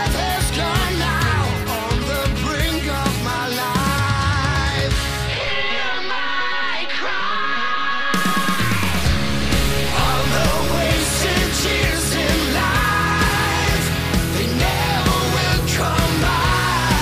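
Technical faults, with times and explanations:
5.47–10.79 s, DC step: a low thump at 5.47 s, with the sound continuing unchanged after it. The waveform's zero line jumps by about -23 dBFS and the offset is gone by 10.79 s; the abrupt shift is heard as a thump.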